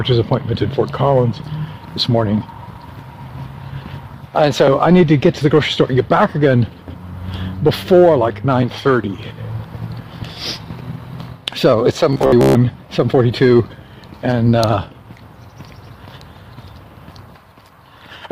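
Robotic sound from repeated short buffers runs from 12.13 to 12.55 s: most of that stretch replays the same fragment of about 15 ms, likely because fresh audio arrived too slowly, imposing a rigid, metallic buzz at 66.8 Hz over the sound.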